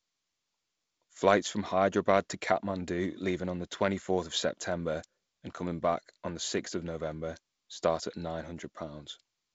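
The speech has no technical faults; the path it comes through is G.722 wideband telephone coding, with nothing above 7.7 kHz and a light graininess in the lower band that points to the codec running at its reduced 48 kbit/s rate.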